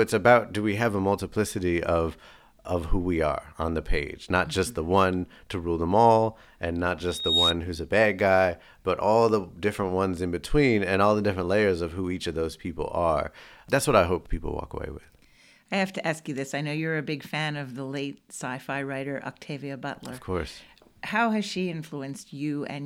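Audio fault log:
7.07–7.56 s: loudspeaker feedback squeal. A single tone near 3.8 kHz swells over roughly a third of a second and ends about 5 dB above the speech. The microphone hears its own loudspeaker, and at that frequency the loop gain passes one, so the tone feeds itself.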